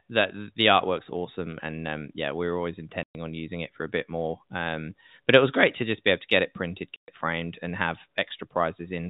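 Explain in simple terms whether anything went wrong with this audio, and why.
Two short gaps cut into the speech. This is packet loss filled with silence: chunks of sound went missing in transit, and silence was played instead. The first runs 3.03 to 3.15 s, after "yeah we were always". The second runs 6.97 to 7.08 s, after "to get it printed". Each hole lasts 120 ms, which fits four lost 30 ms packets. The edges are abrupt and can click. The telephone-style sound of the line is normal for G.711 telephone coding.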